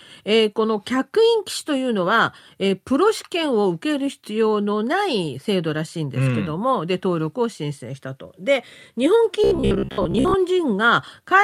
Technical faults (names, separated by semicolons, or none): robotic sound from repeated short buffers